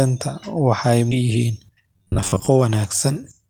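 This speech clip jumps abruptly forward at 1.11 to 1.13 s with almost no gap, losing roughly 0.7 s of speech. This skip ahead happens when buffered audio is discarded so playback catches up to later audio. From 1.21 s to 3.48 s the speech runs about 10% fast at unchanged pitch and sounds hurried. That is jitter buffer speed-up: short pitch-period slices, totalling around a fifth of a second, are trimmed repeatedly to shrink excess delay. Between 1.97 and 2.49 s the speech turns into a rigid metallic buzz at 93.8 Hz that only loosely tracks the talker. This is robotic sound from repeated short buffers, likely caused by late-arriving audio being covered by looping a segment of roughly 10.7 ms, with about half the material repeated instead of real.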